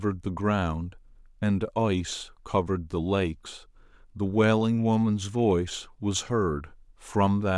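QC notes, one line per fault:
No faults detected in this clip.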